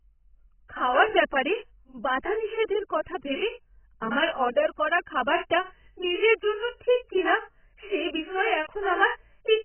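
AAC compression runs throughout this speech clip, with nothing above 3.1 kHz, a dull, smeared, warbling sound on sustained vowels and sibilants, and heavy damage likely from AAC-LC at around 10 kbps.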